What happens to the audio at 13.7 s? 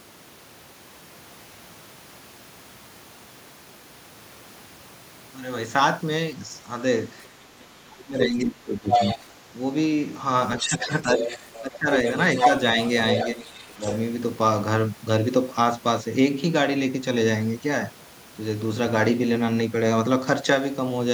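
At 13.7 s two faults overlap. The first is the other side's voice leaking through, which runs from 10.58 to 13.95 s. A second voice sits under the main talker, only a few decibels quieter. This is likely loudspeaker playback on the talker's device reaching its microphone, with the echo canceller leaving part of that far-end signal in place. Because it is nearly as loud as the wanted speech, it competes with it rather than lurking in the background.

The second fault is speech suppressed in double talk, between 12.76 and 13.82 s, so 13.7 s falls near its end. While both voices are active, the main talker briefly dips by roughly 5 dB, with the affected moments adding up to about a tenth of a second. The likely cause is the canceller failing to tell near-end speech from echo and attenuating both together.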